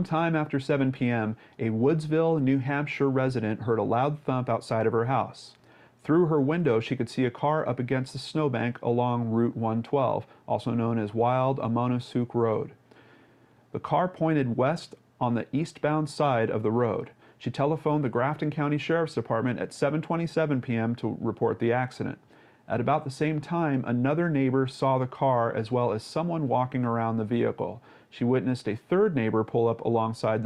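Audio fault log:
No fault can be heard anywhere in the clip. Nothing in the audio calls for an entry in this log.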